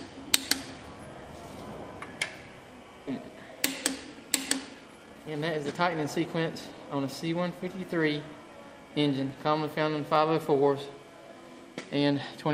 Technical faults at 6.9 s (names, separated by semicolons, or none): jitter buffer speed-up